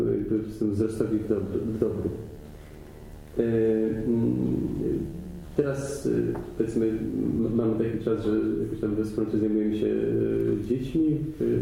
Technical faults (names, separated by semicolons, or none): video or display buzz